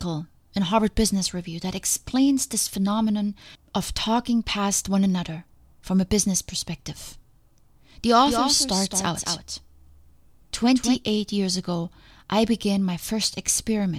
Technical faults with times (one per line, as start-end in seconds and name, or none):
8.20-10.96 doubled audio track